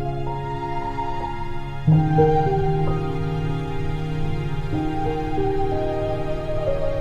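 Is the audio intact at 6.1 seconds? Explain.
Yes, the audio is intact at 6.1 seconds, with no dropout, click, distortion or other fault at that point.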